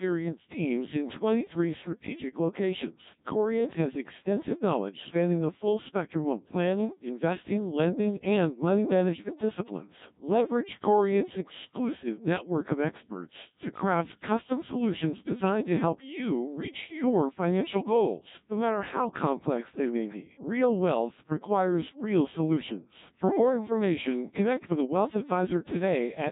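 Throughout, the speech has passed through a Codec 2 vocoder, rebuilt from sine waves using only pitch, voicing, energy and spectral shape, with heavy damage consistent with a 1.3 kbit/s mode. Voices sound robotic and buzzy, and nothing remains above 3.8 kHz.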